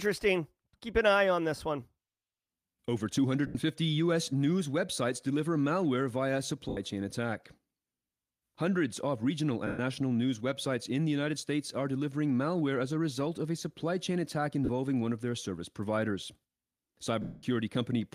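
At 3.47 s, 6.69 s, 9.67 s, 14.65 s and 17.22 s the speech briefly turns into a hissy, smeared wash. The gaps last 80, 80, 120, 40 and 210 ms. The 210 ms one at 17.22 s fades audibly toward silence before the speech returns. These are lost LE Audio frames. The LC3 decoder fills each gap by repeating the last spectrum with scrambled phase, and the gaps fit runs of 10 ms frames.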